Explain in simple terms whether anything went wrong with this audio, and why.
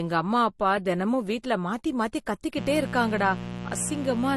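Transcoding between lossy codecs runs through the whole clip. The speech has a dull quality, and nothing above about 12.1 kHz survives. This likely comes from the recording being squeezed by one data-saving format and then re-squeezed by another. The second pass spends effort preserving the first pass's damage and adds its own, so both kinds of blur are heard together, and the crisp top end lost early never returns.

Mains buzz starts at 2.57 s and continues to the end at 4.37 s. A steady, raspy hum sits fairly loud under the speech, not far below it in level. It comes from the 60 Hz electrical supply leaking into the audio through something like a dimmer, a power adapter or unshielded cable. The sharp electrical spikes repeat in every power cycle, creating a rough buzz rather than a smooth tone.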